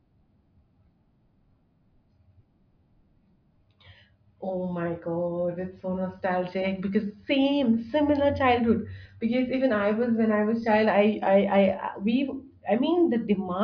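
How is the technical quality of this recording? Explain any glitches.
No technical faults are audible in the recording, so there are no glitches to explain.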